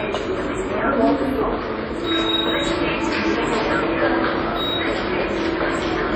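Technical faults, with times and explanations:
Throughout: WMA compression. The audio was likely passed through a Windows Media Audio transform encoder at a low rate, with the heaviness of the damage pointing to something near 32 kbps. Quantisation noise smeared across long blocks gives a ringing, washy quality, with a hiss that swells and fades with the sound. Weaker components are dropped outright, thinning the texture, and nothing remains above 15.3 kHz, leaving the top end dull.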